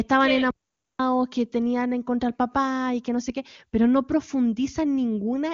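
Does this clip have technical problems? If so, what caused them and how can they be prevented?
Yes. At 0.51 s the speech cuts to silence for about 0.49 s, resuming at 0.99 s with "que tenían en contra". This is a playback stall, likely from the player's buffer running dry or its thread being blocked. Larger playback buffers and a higher-priority audio thread prevent it.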